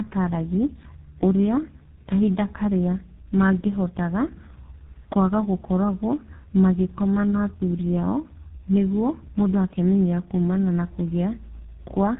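Speech with tandem speech coding throughout: nothing above 3.8 kHz, and rougher, more warbly artefacts than a single codec gives, fitting G.723.1 then GSM full rate.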